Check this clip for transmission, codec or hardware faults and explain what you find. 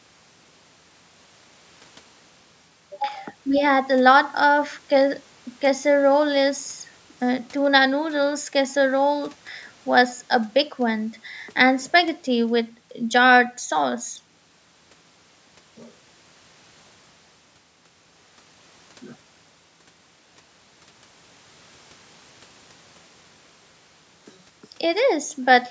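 No transmission, codec or hardware faults turn up anywhere in this speech. What can be heard is the call's microphone processing doing its normal job, with the lowest bass trimmed away by its high-pass filter and nothing above 8 kHz.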